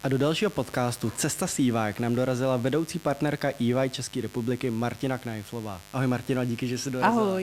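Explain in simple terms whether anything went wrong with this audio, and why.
There's a mains buzz under the speech from start to finish: a steady, raspy hum. It likely comes from a dimmer, rectifier or poorly shielded cable letting sharp electrical spikes from the 50 Hz power supply leak into the recording, quieter than the voice.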